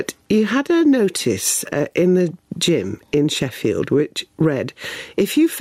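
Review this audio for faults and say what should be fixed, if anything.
Gain pumping runs through the whole clip. The gain ducks under every loud sound, swinging by around 15 dB. Loud and soft parts sit squashed together. The likely cause is input gain set far too high, with a fast limiter pulling it down. Set the input gain lower and ease the limiter's threshold and speed.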